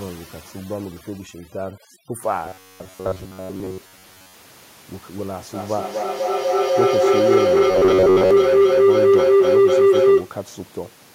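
From 0 to 2.23 s, overdone noise removal is audible. The suppressor pushes bands near its noise estimate far down, leaving near-silence with twinkling specks between phrases, and the quieter parts of speech go with it.

From 2.46 to 4.34 s, and again from 7.71 to 8.31 s, the speech becomes a rigid, metallic buzz at 93.8 Hz that loosely tracks the words. This is robotic sound from repeated short buffers, likely caused by a segment of roughly 10.7 ms being replayed while most of the real audio is skipped.

From 5.54 to 10.4 s, a feedback howl builds around 400 Hz, reaching about 12 dB above the speech. It pulses roughly every 0.2 s, which points to a microphone-to-loudspeaker loop that gains level on each trip. Room noise sits about 18 dB below the speech.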